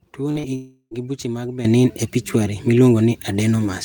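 At 0.31 s and 0.39 s, short concealed packet loss leaves two brief smears. Each covers a 40 ms gap that the decoder filled by extending the last sound.

From 0.55 to 0.94 s, a long network dropout is the likely cause. A fading buzz fills about 0.36 s, then brief silence before "gi buche mag".

At 1.65 s, just after "gi buche mag", a sudden gain jump is the likely cause. Sound and background jump about 12 dB together and stay loud.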